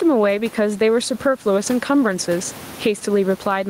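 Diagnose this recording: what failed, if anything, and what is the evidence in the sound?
Gain pumping throughout: the room noise, about 29 dB below the speech, rides a gain swing of around 15 dB. The likely cause is excessive input gain with a fast limiter clamping peaks. Unlike noise-suppression gating, the background breathes but never cuts out.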